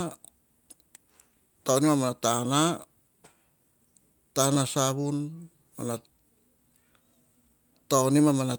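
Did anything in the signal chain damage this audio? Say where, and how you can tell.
No, nothing in this speech recording stood out as damaged on listening.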